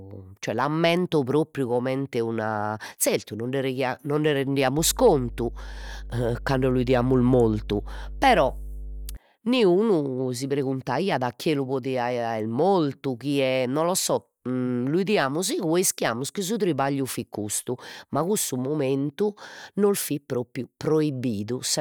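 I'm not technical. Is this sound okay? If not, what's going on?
No. From about 4.78 to 9.17 seconds a steady, fairly loud low buzz sits under the speech, stopping just before "niunu si preguntaiat chie". That is mains hum: electricity from the power supply at 50 Hz leaking into the recording through a ground loop or a nearby transformer.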